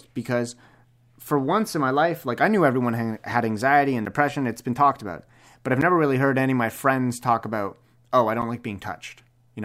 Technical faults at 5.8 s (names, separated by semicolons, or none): block of digital silence